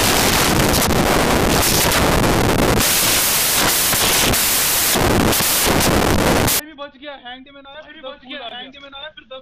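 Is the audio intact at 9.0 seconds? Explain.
Yes, the audio is intact at 9.0 seconds, with no dropout, glitch or other fault at that moment.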